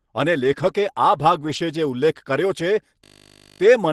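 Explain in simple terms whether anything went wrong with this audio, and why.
Lost packet rebuilt from error correction, at 0.39 to 0.69 s and 1.35 to 1.57 s: pieces of the call were lost in transit, and rougher backup copies filled in, so those moments sound grainier and noisier but have no gap.

System hang loop, at 3.04 to 3.6 s: the computer froze while the sound hardware kept replaying one 20 ms scrap, about 28 times, giving a steady 50 Hz buzz.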